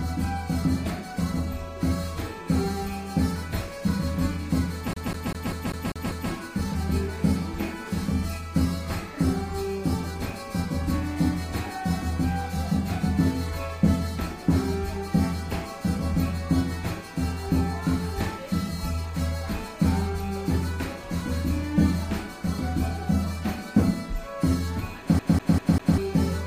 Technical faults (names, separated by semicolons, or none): CD stuck on one turn